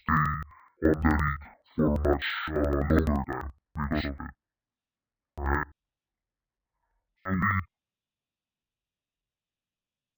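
Throughout, interleaved audio is read as planar: each block of alternating left and right samples is split in half, and both halves play together at half speed. The 85.33 ms blocks, which fit 4096 samples, leave the speech an octave low, doubled and choppy, stuttering at 11.7 Hz.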